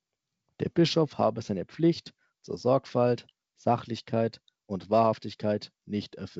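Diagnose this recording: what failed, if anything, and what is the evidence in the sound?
Nothing failed; the wideband telephone coding works as intended.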